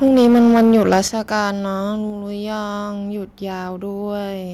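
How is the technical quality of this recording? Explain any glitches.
The recording has two related problems: harsh clipping on the opening second of speech and a series of abrupt level drops.

Microphone overload, from 0.04 to 1.0 s: the loudest syllables are flattened and crackly, with peaks pushing about 7 dB past the converter's limit and a sizeable share of the waveform cut off. The likely cause is an input gain set so high that the converter runs out of headroom and slices the tops off every strong peak, turning them into a gritty, buzzing edge.

Microphone volume stepped down, at 0.08 s, 1.08 s and 2.1 s: the speech and its background noise suddenly drop in level, by about 2 dB, about 8 dB and about 3 dB. The likely cause is call software reacting to the overloaded input by cutting the device's input volume in single jumps rather than a smooth fade. The large step at 1.08 s comes right after the clipped stretch ends.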